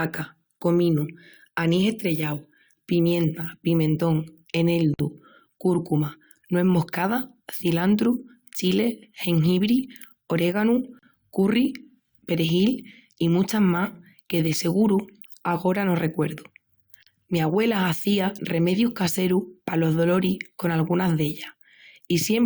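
Brief dropouts break the speech at 4.94 s (51 ms, before "cúrcuma nues moscada cilantru"), 10.99 s and 17.03 s (37 ms each, before "curry perjil y muchas" and after "seguru agora no recuerdu"), every 6 s. These gaps at a join of encoded pieces come from splicing separately encoded segments without trimming encoder delay and padding.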